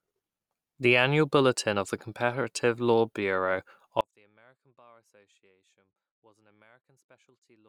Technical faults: audio dropout to a faint residue

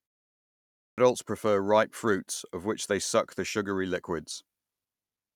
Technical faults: clipped start after a pause

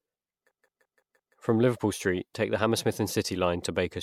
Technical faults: system hang loop

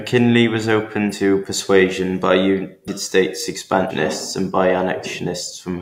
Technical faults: compressed frames skipped

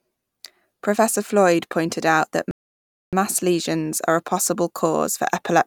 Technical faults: rebuffering stall

